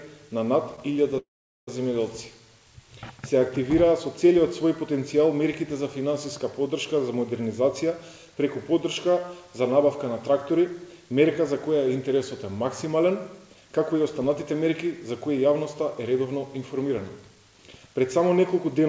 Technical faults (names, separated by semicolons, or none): call audio freeze; jitter buffer speed-up